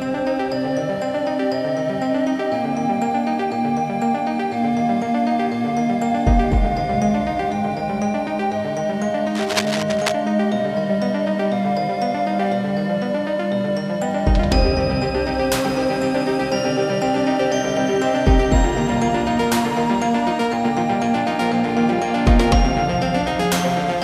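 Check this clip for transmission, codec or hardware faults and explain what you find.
One hardware fault stands out. Cable scratch noise runs from 9.35 to 10.12 s, likely from a worn cable, connector or control being moved so its contact resistance fluctuates rapidly. The result is a dense, ragged burst of scratching and rustling laid over the sound, sitting roughly 10 dB below it.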